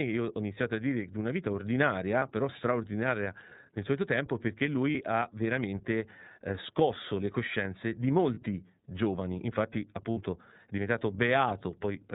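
Speech passed through the iLBC codec, probably its 30 ms frame mode at 13.33 kbps, strips everything above 4 kHz and codes each frame independently. The result is plainly audible codec damage: a narrowband, slightly rough and synthetic quality across the whole recording. Packets carrying iLBC frames were also lost, so the decoder filled each gap by repeating the last pitch cycle blended with noise. This produces short held, faintly buzzy vowel sounds of about 30 ms at 2.19–2.23 s (just before "però straordinaria nel solito"), at 4.92–4.95 s (between "nel solito tempo perché" and "ha veramente eh scosso"), and at 8.34–8.38 s (after "scosso le coscienze di"), plus a longer 60 ms patch at 10.11–10.18 s. In each case the voice recovers almost immediately afterwards.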